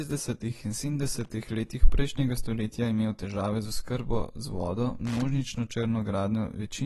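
Speech with a dull, smeared, warbly sound and nothing above 12.1 kHz, likely AAC compression at a low bitrate of around 32 kbps; a spectrogram shows a hard ceiling there. Loose connector crackle from a contact making and breaking appears at 1.15–1.30 s and 5.05–5.23 s as irregular scratchy bursts, seen as dense jagged spikes in the waveform.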